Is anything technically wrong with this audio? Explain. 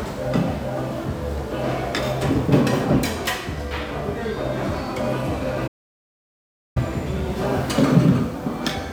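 Yes. At 5.67 s the sound cuts to silence for about 1.08 s, resuming at 6.77 s: a playback stall, likely the player starving for data or its thread blocking.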